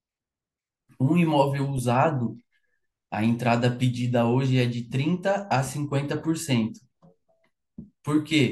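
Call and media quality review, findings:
Clock slip clicks, 0.31–8.45 s, speech: faint ticks at a steady interval of roughly 0.3 s, about 30 single-sample slips. Likely two unsynced device clocks, around 100 ppm apart. Even spacing and no gap distinguish it from packet-loss dropouts.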